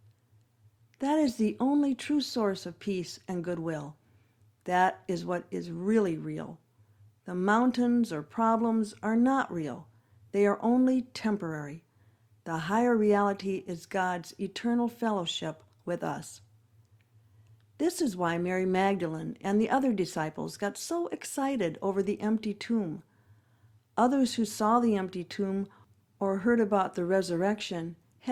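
No technical faults can be heard anywhere in this speech recording. At no point does anything in the sound stand out as a technical problem.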